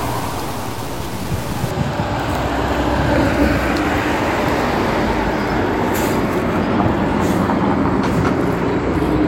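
From 0.0 to 1.70 s the sound turns grainy and gritty, roughly 15 dB under the signal; likely low bit depth without dither, truncated to 5 bits.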